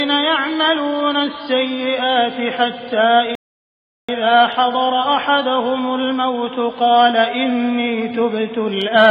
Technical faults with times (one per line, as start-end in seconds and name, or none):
3.35-4.09 playback stall